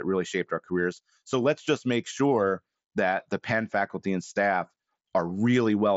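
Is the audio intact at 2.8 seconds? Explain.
Yes, the speech at 2.8 seconds is intact, with no fault at that moment.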